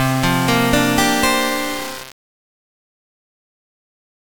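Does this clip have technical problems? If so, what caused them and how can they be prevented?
Yes. Low bit depth without dither, likely from rounding to very few bits, which fits about 4-bit quantisation, leaves grainy distortion throughout that tracks the sound, roughly 15 dB below it. Keep at least 16 bits, and add dither whenever reducing bit depth.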